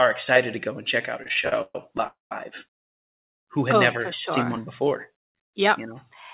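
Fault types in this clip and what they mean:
Repeated stalls (stutter), 1.23 to 2.07 s: Right after "and check out a", the sound halts about a dozen times in under a second, with the longest hold lasting 126 ms. Packets reached the receiver late and its jitter buffer kept running dry. Each time it stretched out the last sound until more data came, filling 261 ms, about 31% of that stretch. Nothing is lost, but the passage drags and stutters.
Call audio freeze, 2.07 to 2.32 s and 2.84 to 3.32 s: The likely cause is packets held up in transit, which emptied the jitter buffer. In the first freeze the receiver carries the last sound forward for 238 ms, and it fades to silence for the final 150 ms. The second is a 470 ms silent gap just before "who had oh never". Playback then resumes where it stopped, so nothing is missing, but the delay grows by the length of each gap.
Jitter buffer slow-down, 4.56 to 5.54 s: Just after "oh never sure seen", the sound runs at about 94% speed with its pitch unchanged. 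The buffer was building up a reserve, so the receiver repeated single pitch periods and small pieces of pauses many times in a row. This added 66 ms in total, and the sounds in that stretch come out slightly drawn out.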